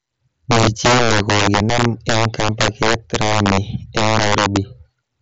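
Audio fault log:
Throughout: integer overflow. The speech is pushed about 12 dB too hot, and around one sample in twenty wraps past full scale to the opposite sign. That is why loud syllables give violent cracks rather than clipping's flattened buzz. The audio tops out near 7.7 kHz, which fits the mSBC headset path.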